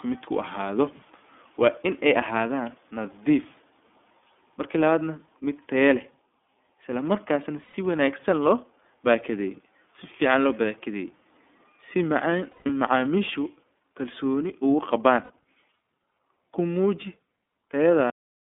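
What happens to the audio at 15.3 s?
At 15.23 to 15.30 s there are lost iLBC frames. The gap fits two missing 30 ms frames, and the decoder fills it by repeating the last pitch cycle mixed with noise. It sounds like a brief held, slightly buzzy vowel, and the speech recovers straight after because each frame decodes on its own. On a spectrogram the harmonics run flat and smeared across that span, and the waveform shows one cycle repeating.

The gap sits inside speech coded throughout with the iLBC codec, a narrowband VoIP codec that codes each 30 ms frame independently at 13.33 kbps. The sound is confined to roughly 250 Hz to 3.5 kHz, so a spectrogram shows a hard ceiling at 3.5 kHz, and the voice has a plainly audible, slightly rough, synthetic edge.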